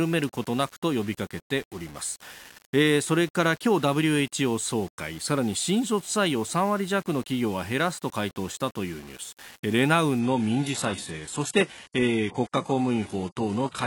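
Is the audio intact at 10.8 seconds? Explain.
No. At 10.8 seconds the audio sits inside a stretch of adaptive stream at a lower bitrate, running from 10.19 s to the end of the clip. The connection slowed, so the player switched to a much leaner encoding. The sound points to a drop from about 96 kbit/s AAC to a 12 kbit/s HE-AAC version. Nothing above 11.5 kHz survives. The speech loses its air and crispness. The change is abrupt, with no gap.

A second fault runs through the whole clip and is present here too. The speech has a grainy, gritty edge that moves with the signal. This is likely low bit depth without dither. The level steps are coarse, consistent with about 7 bits, and values were rounded with no added noise to mask the error. That error sits roughly 25 dB below the speech. Quiet passages sound rough and gritty rather than smooth.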